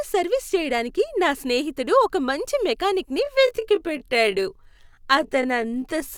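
Right after "స్నేహితుడు ఒక మంచి మెకానిక్", at 3.19 s, the pace suddenly drops to about 0.63 times normal and stays there to the end, pitch unchanged. That's a time-stretched section, likely software padding it out by repeating short slices, so it drags.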